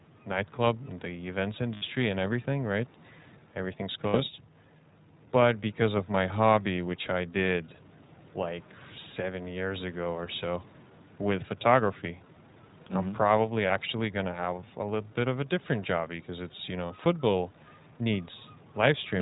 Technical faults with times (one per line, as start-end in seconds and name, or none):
0.00-19.21 iLBC codec
1.74-1.83 lost iLBC frames
4.08-4.16 lost iLBC frames
13.68-13.71 lost iLBC frames
16.86-16.90 lost iLBC frames